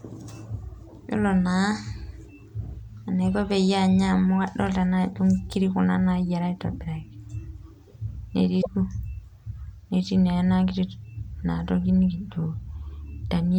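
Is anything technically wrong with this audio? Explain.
Yes. At 8.58 to 8.67 s, the speech is briefly replaced by a short glitch lasting about 80 ms. This is damaged data in a compressed stream: corrupted bytes made the decoder misread those frames and lose sync until it found the next valid frame header.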